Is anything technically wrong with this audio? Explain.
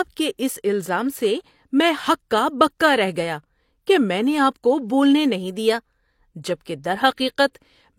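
Yes. At about 0.38 s, just before "اس الزام سے میں", there is pre-echo: a transform codec spread quantisation noise across its block, so a short hiss runs about 11 ms ahead of the attack. Unlike reverberation or a delayed echo, this smear comes before the onset, not after it.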